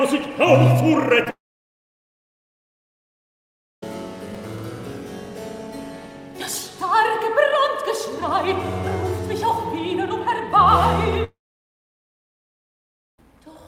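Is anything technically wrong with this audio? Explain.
Yes, there are three kinds of fault.

Short concealed packet loss at 1.24–1.27 s: about 20 ms of audio missed the decoder, and the receiver filled the hole by extending the preceding sound before blending back into the real signal. This is heard as a brief smear or wobble.

Long network dropouts at 1.30–3.83 s and 11.24–13.19 s: these gaps likely come from the network delivering nothing for a long stretch. Each begins with a short fading continuation of the last sound. About 2.45 s of silence follows in the first, and about 1.84 s in the second. The sound then resumes with the missing portion gone.

Processor overload crackle at 4.35–4.60 s: several buffers, each a few milliseconds long, missed their deadlines, and stale audio was replayed in their place. The hard-edged repeats add up to a gritty, tearing crackle that stops once the load clears.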